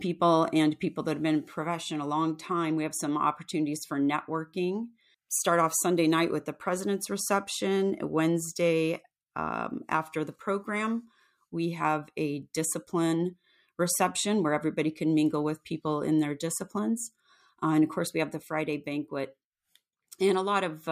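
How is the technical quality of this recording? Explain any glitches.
Nothing in the recording stood out as a technical problem on listening.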